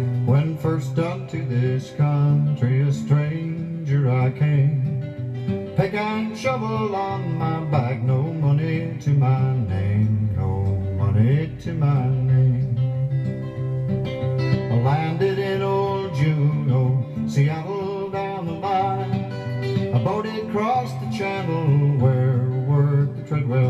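Nothing stood out on listening to this recording.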